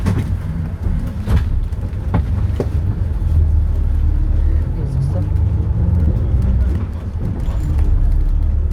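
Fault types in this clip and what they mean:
Short concealed packet loss: about 40 ms of the stream arrived too late, and the receiver patched the gap at 6.03 s by extending the preceding sound, leaving a brief smear.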